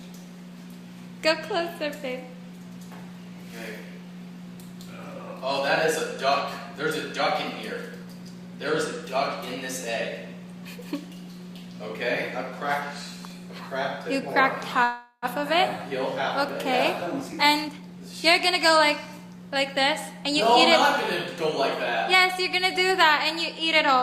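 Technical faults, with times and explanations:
14.83 to 15.25 s, call audio freeze: the sound stops advancing and the last moment is stretched into a fading buzz for about 390 ms, ending in roughly 60 ms of silence, then resumes where it left off. Likely the jitter buffer ran empty while packets were held up. A spectrogram shows smeared, static bands fading to a blank gap.
16.95 to 19.66 s, jitter buffer speed-up: the audio plays about 115% fast at unchanged pitch, sounding hurried, as the receiver trims short pitch-period pieces to cut the added delay, removing roughly 0.4 s in all. The waveform shows periods of unchanged length with whole periods cut out, the spectrogram unchanged harmonic spacing.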